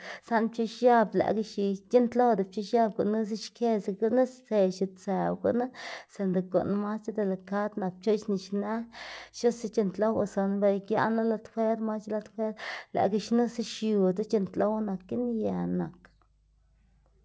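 No technical faults can be heard anywhere in the recording. The speech has come through a call path whose coding caps the bandwidth, with nothing above 8 kHz, which fits a wideband codec such as G.722.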